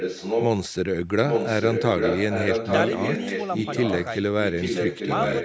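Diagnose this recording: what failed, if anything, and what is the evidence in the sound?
Echo leak at the call-processing stage: a delayed copy of the speech, trailing it by about 0.84 s, runs from 0 to 0.46 s, from 1.28 to 4.07 s, and from 4.5 s to the end. In the first two stretches the copy is roughly as loud as the speech itself; in the last it sits somewhat lower. The likely cause is a far end on loudspeaker whose echo canceller let its microphone pickup through and sent it back.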